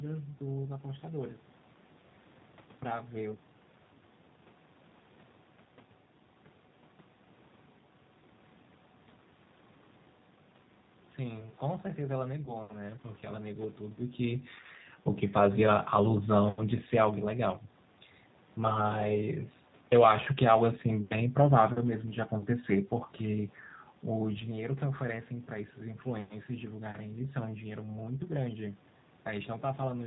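Throughout, the speech passes through the G.729 codec at 8 kbit/s. Rebuilt from a filter and sparse pulses, it sounds rough and synthetic, with nothing above 4 kHz.

At 12.45 s, packet loss concealed by the speech codec follows. A 20 ms gap, which fits one lost packet, becomes a fading extrapolation of the voice. The sound stays weak or distorted until 12.56 s.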